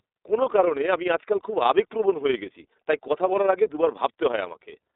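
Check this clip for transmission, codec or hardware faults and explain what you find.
Two faults run through the whole recording: codec damage consistent with iLBC, and overlap-add ripple.

The iLBC codec is present from start to finish. The speech sits in a telephone band of roughly 300 Hz to 3.7 kHz, with nothing above. The codec codes each 20 ms frame's excitation independently, so the damage is plainly audible: the voice is intelligible but grainy and somewhat synthetic. The quality fits iLBC's 15.2 kbps mode.

Overlap-add ripple is also continuous. The audio was split into windowed frames and rebuilt with an overlap whose gains do not sum evenly, so the level dips and recovers by about 6 dB every frame. That happens around 20 times a second, which is heard as a rapid flutter, a rough tremolo laid over the speech.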